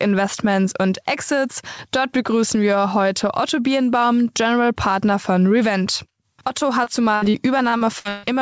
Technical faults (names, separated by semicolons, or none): repeated packet loss (robotic sound)